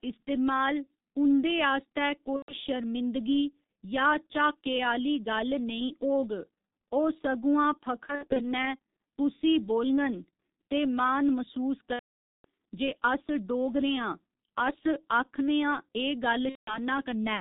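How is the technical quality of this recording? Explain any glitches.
Technical quality is poor: the speech is heavily coloured by a low-rate telephony codec throughout, and four dropouts are patched over audibly.

Throughout: the G.723.1 codec. The sound has been squeezed through a narrowband coder whose rate fits roughly 6.3 kbit/s, updating its vocal-tract model only once per 30 ms frame. Nothing survives above 4 kHz, so the speech is muffled and hoarse, with consonants smeared and transitions between sounds blurred.

2.36 to 2.55 s, 8.06 to 8.41 s, 11.93 to 12.45 s, and 16.49 to 16.78 s: VoIP packet loss concealed by the speech codec. Missing packets forced the decoder to keep extrapolating from its last pitch and filter while lowering the gain. The first gap, about 120 ms long, ends just before "शर्मिंदगी या". The second is about 150 ms of loss scattered across 300 ms, with no run longer than 60 ms. 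The third is the worst, about 510 ms, which points to a long burst of consecutive lost frames. The last is about 180 ms. Each gap turns into a buzzy, stretched tone or coloured noise that fades. Because every frame builds on the previous one, the speech stays weak and distorted for a moment after packets resume.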